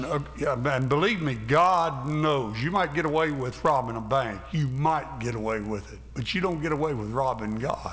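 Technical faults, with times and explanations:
Throughout, resampler restarted on every block: a 50 Hz buzz rides on the sound and vanishes when the signal stops. Each 20 ms block was converted separately, which fits a 48 kHz to 16 kHz conversion, so every block edge carries a small error.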